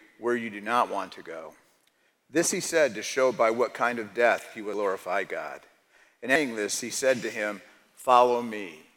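Compressed frames skipped at 4.74 s and 6.36 s: lost or rejected frames jump the audio ahead about 0.3 and 0.5 s.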